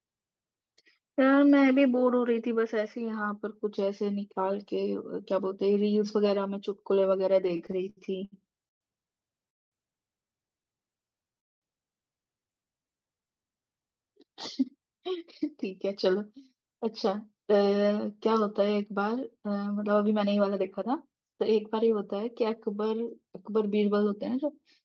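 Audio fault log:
7.43–9.50 s, repeated stalls (stutter): ten short holds, the longest 127 ms, fill about 343 ms. Many brief catches with nothing lost, unlike one long freeze.
9.50–9.74 s, call audio freeze: one continuous 220 ms silence where the sound stops and resumes intact. The likely cause is the delay growing by 220 ms, not dropped audio.
10.72–13.27 s, jitter buffer slow-down: the sound plays at 91% speed with pitch unchanged, adding 234 ms. The drawn-out sounds come from repeated pitch periods, not from a lowered pitch.
11.39–11.64 s, call audio freeze: a second 220 ms silent gap inside the slow-down, likely from a 222 ms delay increase. The sound picks up exactly where it stopped.
14.76–21.99 s, jitter buffer speed-up: the sound runs at 109% speed, hurried but at the same pitch, with roughly 0.7 s trimmed away in small pitch-period cuts.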